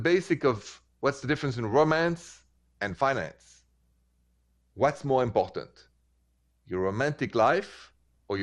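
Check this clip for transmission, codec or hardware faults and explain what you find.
There's one fault, and it runs through the whole clip: MP2 compression damage, plainly audible. The speech sounds dull, with a gurgling, grainy edge on top. The likely cause is MPEG Layer II coding starved of bits, which fits a rate around 80 kbps. With that little to go round, the encoder drops the upper sub-bands entirely and quantises the remaining ones coarsely, so the highs vanish and the texture turns granular.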